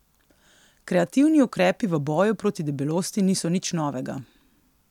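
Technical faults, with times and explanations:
No technical faults can be heard in this recording.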